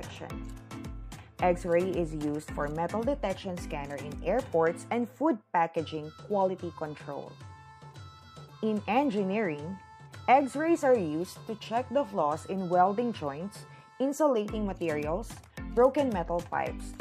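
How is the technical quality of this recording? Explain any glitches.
Nothing stood out on listening; no glitches could be heard anywhere in the recording.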